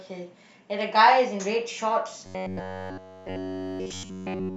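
From 2.26 s to the end, the speech collapses into robotic sound from repeated short buffers: a rigid, metallic buzz near 94 Hz that loosely tracks the speech's rhythm. The likely cause is audio arriving too seldom, so playback loops a fragment of about 10.7 ms while fresh material is skipped, and the repetition is essentially continuous. A waveform would show one short shape tiling end to end, and a spectrogram would show flat harmonics stacked at 94 Hz spacing.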